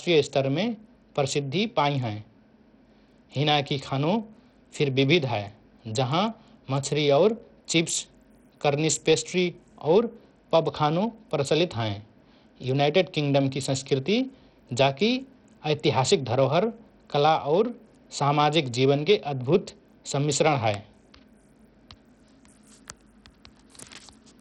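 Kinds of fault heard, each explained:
Bluetooth SBC compression: throughout, the speech has nothing above 11.9 kHz and carries a heavy gritty, aliased roughness. This is likely from SBC's few fixed sub-bands starving the upper bands and coarsely quantising the rest, which fits a bitrate near 64 kbps.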